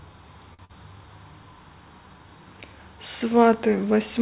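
At 0.54 s the speech hangs on one sound for about 47 ms, with a faint buzz or dip, until 0.61 s. This is a short stall from a late packet: the jitter buffer ran dry and the receiver stretched the last sound, then resumed without losing anything. From 0.65 to 0.71 s a brief smear replaces roughly 40 ms of speech. That is short concealed packet loss, where the gap was patched by extending the preceding sound, all inside a narrowband call path with nothing above 4 kHz, consistent with G.711 mu-law.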